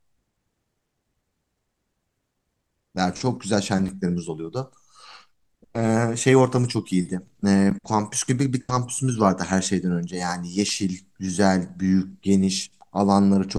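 A speech clip with two blocks of digital silence, at 3.88 s and 7.70 s. In each, a run of samples drops abruptly to silence and then resumes with no fade. The first hole lasts about 5.3 ms and registers as a tick; the second lasts about 10.7 ms and is likewise heard as a tick or dip. The durations fit 256-sample and 512-sample buffers, consistent with the audio path failing to fill an output buffer in time.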